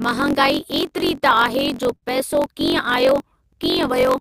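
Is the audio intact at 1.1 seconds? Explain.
No. Repeated stalls (stutter) run from 0.69 to 1.24 s: packets arrived late, the jitter buffer emptied five times, and each gap was filled by continuing the last sound, up to 36 ms at a time, so the speech drags and stutters without losing anything. Throughout the clip, including this moment, a block size mismatch (truncated) discards the end of each block, which fits 1024-sample writes. This produces a 45.9 Hz buzz and speech running 1.07 times fast.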